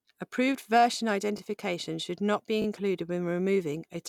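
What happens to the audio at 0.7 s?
Nothing goes wrong at 0.7 s; the speech there plays through intact, with no dropout, click or distortion.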